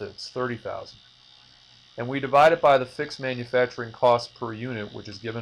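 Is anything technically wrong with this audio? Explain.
Yes, there is hard clipping in two places: from 2.35 to 2.76 s, overdriven by about 5 dB, and from 4.04 to 4.13 s, by about 2 dB. The signal exceeds what a stage can pass, so peaks are sliced flat, generating high harmonics. The first stretch gives a gritty fuzz on loud moments; the second is a brief crackle. Unlike soft saturation, the onset is abrupt and brittle rather than a gradual warm thickening.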